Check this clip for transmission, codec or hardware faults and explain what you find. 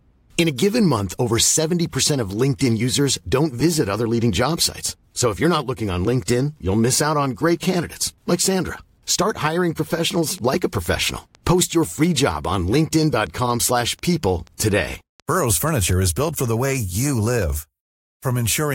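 One fault stands out: a train of clicks running from 10.15 to 16.18 s. Over those six seconds a steady ticking sits on top of the speech at about 4.15 clicks per second, evenly spaced, around thirty in all, each roughly as loud as the voice and heard in the pauses as well. The near-identical shape and metronomic pace point to a repeating pulse, likely interference from nearby equipment or a faulty connection or power supply.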